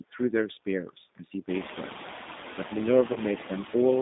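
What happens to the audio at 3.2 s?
Right around there you're hearing VoIP packet loss concealed by the speech codec. From about 3.13 to 3.19 s a chunk of audio, roughly 30 ms, consistent with a single lost packet, went missing, and the decoder papered over it by extending its last pitch and vocal-tract settings while ramping the level down. That gives a brief smeared stretch, a buzzy tone or a coloured noise that fades, and because each frame leans on the one before, the sound stays a bit weak or off just past 3.19 s, so 3.2 s is still in that recovery tail.

The G.729 codec is also shaping that moment, as it does across the whole clip. The sound is confined to roughly 200 Hz to 3.7 kHz, which fits G.729's narrow telephone band, and the codec rebuilds speech from a filter, a pitch predictor and a few pulses per short frame rather than carrying the real waveform. The damage is plainly audible: the voice comes out a little rough and synthetic, with a coarse edge on top of the dullness from the missing highs.

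There are noise suppressor artifacts too, again all the way through. The suppressor pulls down whatever bands it judges to be steady background noise, frame by frame, by about 5 dB here. The noise floor dips in the gaps and comes back up under the speech.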